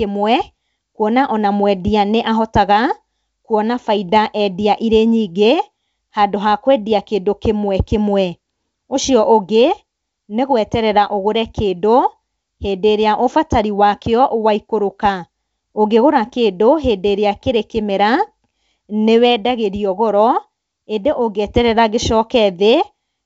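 The speech arrives through a WebRTC call path that is working as it should, with the audio band stopping at 8 kHz in the way that fits a G.722 link, and no technical fault can be heard anywhere in it.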